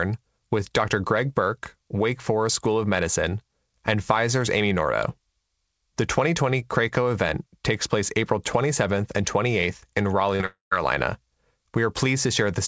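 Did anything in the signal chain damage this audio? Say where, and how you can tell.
Yes. Between 10.36 and 10.42 s, 40 ms of packets reached the G.722 call decoder too late. This is short concealed packet loss on the network side. The receiver bridged the gap by extending the preceding speech, so you hear a brief smear or wobble before the real signal resumes.

Right after, from 10.46 to 10.73 s, the speech breaks off. The last sound carries on as a fading buzz, then about 150 ms of silence follows. Speech returns with about a quarter-second gone. That is likely a long network dropout: concealment filled until it gave up.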